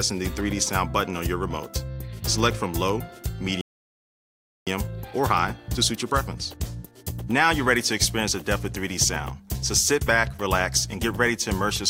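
The audio stops dead at 3.61 s and stays silent until 4.67 s, a gap of about 1.06 s. This is a playback stall, most likely the player running out of buffered data or its output thread being blocked. On a waveform it shows as a flat line cutting straight through ongoing signal. On a spectrogram it is a clean vertical band of nothing, with energy on both sides and no fade into or out of the gap. Once output resumes at 4.67 s, the player works off its backlog with time-compressed catch-up until 7.67 s. It runs at about 1.1 times normal speed, so the audio sounds hurried, but pitch is unchanged because small segments are dropped and cross-faded together rather than the whole signal being resampled. On a spectrogram the harmonics keep their frequencies while events arrive closer together, and the waveform shows slightly compressed envelopes over those three seconds.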